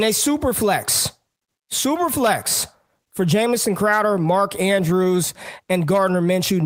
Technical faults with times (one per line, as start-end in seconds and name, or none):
none